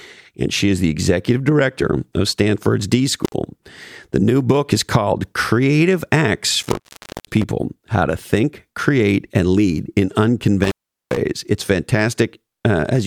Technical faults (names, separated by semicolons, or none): intermittent contact